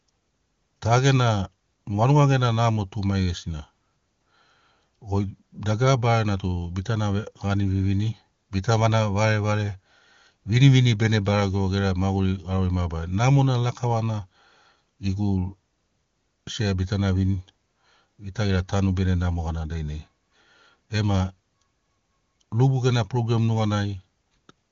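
No technical faults occur anywhere in this speech clip.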